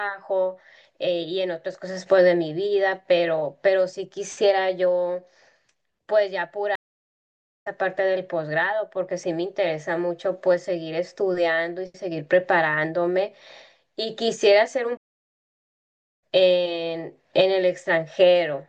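Speech clip with two stream reconnects: the sound drops out from 6.75 to 7.67 s and again from 14.97 to 16.21 s, each time restarting mid-stream, skipping ahead roughly half a second, then about a second.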